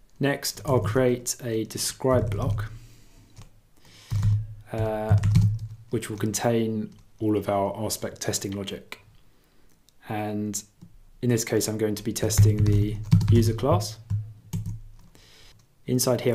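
At 6.76 s the audio suddenly slows by about 5.5% and drops roughly a semitone (around 99 cents flat), then snaps back at 8.28 s. That's a drift correction step, likely clock-matching software changing the playback rate in one jump to rebalance its buffer.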